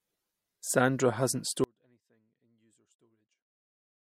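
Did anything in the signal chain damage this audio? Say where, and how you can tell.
Yes. There is an audio dropout to a faint residue from 1.64 s that lasts to the end of the clip. The speech cuts out abruptly mid-flow rather than pausing or fading, and what remains is only a faint sound roughly 40 dB below the normal level. Because the path after the break stays live and carries that residue, the damage is likely in the analogue wiring, such as a failing connector or cable that lets only a weak leak through.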